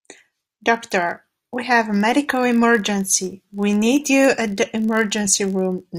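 Throughout the speech, a block size mismatch (padded) is audible as a steady buzz at about 46.9 Hz, which fits a 1024-sample read block. Each block arrives slightly short and is zero-filled, leaving a brief gap. Playback runs only fractionally slow, 0.999 times, with pitch essentially unchanged.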